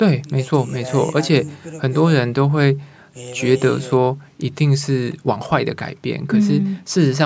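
No technical faults can be heard anywhere in the speech. It has passed through a call's microphone processing, which trims away the lowest bass and leaves nothing above 8 kHz, and that is normal behaviour for such a path.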